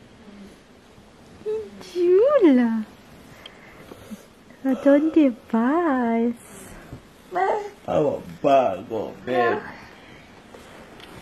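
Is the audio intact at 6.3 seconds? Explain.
No. From 5.64 s to the end of the clip, the adaptive stream is at a lower bitrate. When the connection slowed, the player switched mid-stream to a leaner encoding. The top end turns thin and synthetic and codec artefacts thicken, which fits a step down from a 96 kbit/s AAC stream to a 16 kbit/s HE-AAC one. Unlike a dropout or packet loss, there is no gap or glitch, just one clean, sudden quality step that persists.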